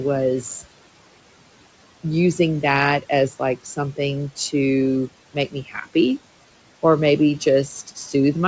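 Throughout, noise suppressor artifacts: the background is pulled down by about 18 dB between phrases and swells back under speech, which shows as patchy, blotchy noise on a spectrogram. From 5.33 to 5.95 s, speech is cut by the noise suppressor, which mistakes quiet parts of the speech for noise and turns them down by up to about 17 dB. Roughly a fifth of a second sounds swallowed, and the waveform shows dips in the envelope there.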